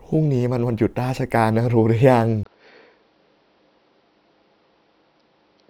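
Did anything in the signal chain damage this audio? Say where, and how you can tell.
Yes. At 2.43 s a 20 ms gap opens, then speech runs to the end with nothing above 5.8 kHz, a few dB quieter, over a new low noise floor. The likely cause is the input switched to a poorer device. A codec bandwidth drop wouldn't bring a fresh noise bed and level shift.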